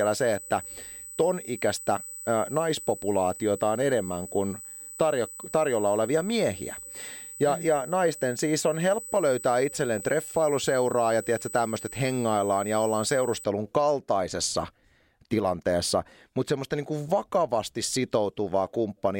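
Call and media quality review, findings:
USB whine, 0.0 to 13.4 s. Steady fixed-pitch tone at 8 kHz, riding well under the speech, roughly 15 dB down. Stops at 13.4 s. Probable component: USB audio interface or headset power/ground path. Mechanism: current drawn in 125-microsecond microframes leaks into the analogue supply. Fix: check grounding, try a powered hub or isolator.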